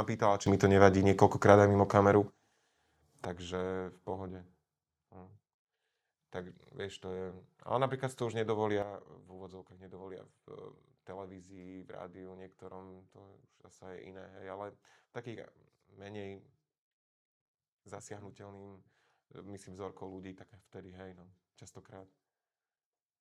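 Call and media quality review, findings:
Sudden gain jump, 0.46 s: speech and noise floor step up about 12 dB together, dropping back at 3.25 s. Again at 8.82 s, after "napríklad to už": about 10 dB down to the end. Likely an unramped digital gain change.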